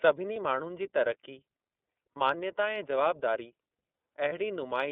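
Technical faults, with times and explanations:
Throughout: iLBC codec. The speech is confined to a telephone band of roughly 250 Hz to 3.6 kHz, with nothing above, and carries a plainly audible rough, slightly synthetic edge. That grain comes from the low-rate coding of each frame's excitation. The texture fits iLBC's 13.33 kbps mode with 30 ms frames. Unlike a plain band-limited line, this roughness sits inside the passband itself.
0.33–0.36 s, 2.13–2.17 s and 4.29–4.33 s: lost iLBC frames. Each gap is one 30 ms frame where the decoder had nothing to play. It filled the hole by repeating the last pitch cycle blended with noise, so each spot sounds like a brief held, faintly buzzy vowel rather than silence or a click. Because iLBC frames stand alone, the speech recovers at the very next frame, with no lingering smear afterwards.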